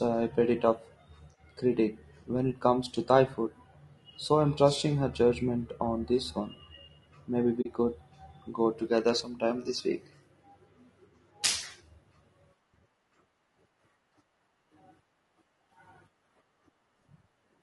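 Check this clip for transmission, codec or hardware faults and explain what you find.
Two faults are audible in this speech: codec damage running through the whole clip, and one short dropout.

Throughout, the speech is grainy and rough, with noise filling the gaps between harmonics and a thin, artificial top band. This is most likely low-delay AAC compression. Its short frames resolve pitch poorly, and the roughness points to a low rate of around 32 kbps. Ordinary AAC would sound smoother and less gritty.

From 7.61 to 7.66 s, just before "could go together sometime", there is AAC frame loss with muting. About 40 ms of sound drops to silence, which fits two lost frames whose spectrum the decoder zeroed. The overlapping windows fade the sound out and back in, so the hole has soft edges, unlike a hard dropout.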